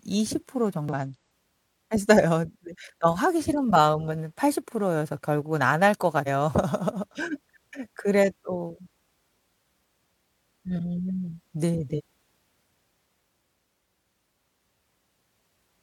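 At 0.89–0.94 s, 6.23–6.28 s, 11.94–12.01 s and 15.33–15.37 s the speech breaks briefly from damaged data in a compressed stream: corrupt frames lose decoder sync.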